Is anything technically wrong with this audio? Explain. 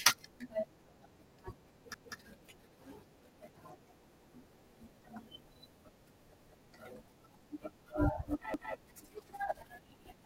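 Yes. The speech shows overlapping chunks at 1.94 to 2.14 s, 6.34 to 6.54 s and 8.54 to 8.74 s. The audio was handled in 2.0 s chunks, each starting 200 ms before the previous one ended, so that stretch plays twice, heard as a stutter at each join.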